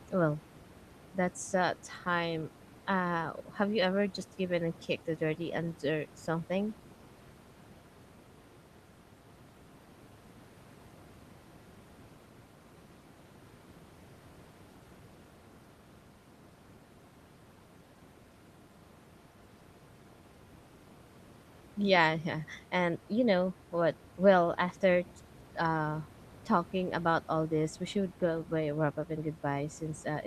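No technical faults can be heard in this recording.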